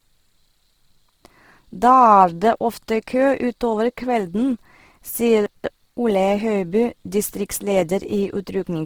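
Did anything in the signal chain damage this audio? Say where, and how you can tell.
Yes. At the codec stage, the whole clip was likely encoded with Opus compression in its CELT music mode at a low rate, which fits roughly 16 kbps. The band stays fullband, with content reaching about 20.3 kHz, so nothing sounds muffled. Instead, the encoder ran short of bits and filled bands with folded or noise-like energy. That makes the speech plainly rough and grainy, with a noisy texture rather than swirling holes.

At the buffering or storage stage, chunks came out of order between 5.46 and 5.7 s. One segment was written or delivered late and plays after material that should follow it. The jumbled stretch and the hard joins point to chunks of about 60 ms, with the displaced one landing roughly three chunks behind its proper place. Nothing is missing, but the speech there sounds garbled, with abrupt discontinuities at each boundary.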